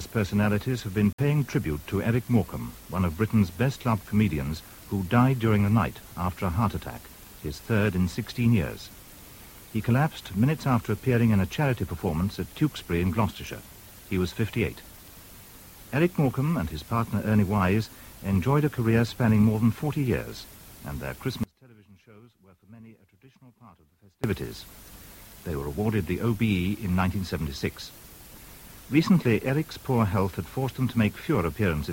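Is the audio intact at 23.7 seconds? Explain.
No, 23.7 s falls inside an audio dropout to a faint residue from 21.43 to 24.24 s. The signal likely broke while the path stayed live, leaving only a faint leak around 30 dB down. On the waveform it appears as an abruptly collapsed, nearly flat stretch, and on the spectrogram as a sharp-edged dim band.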